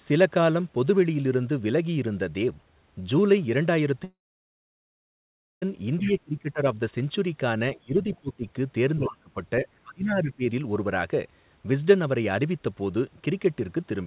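From 4.04 to 5.64 s the audio stops. A likely long network dropout lost about 1.6 s. A fading buzz fills the start, then about 1.5 s of near silence follows.

From 6.02 s, the other side's voice leaking through is likely. It is a faint second voice, about 15 dB below the talker, lasting until 6.12 s. It returns from 7.99 to 8.18 s, about 25 dB down. The echo canceller did not remove all of it.

Speech suppressed in double talk is likely at 6.02–6.60, 7.76–7.95, 8.21–8.45, 8.98–9.37, 9.61–9.67 and 9.84–10.44 s. The talker's voice drops by up to about 25 dB, and only slightly at 9.61 s.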